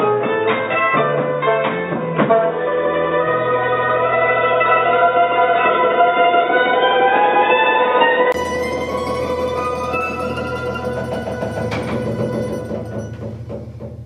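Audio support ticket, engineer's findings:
0.00–8.34 s: dull, boxy sound, nothing above 3.8 kHz, faint extra background noise well below signal. 20 ms gap at 8.34 s, then full bandwidth returns with a modest level shift. Likely input switched to a poorer device with a narrower-band capture path.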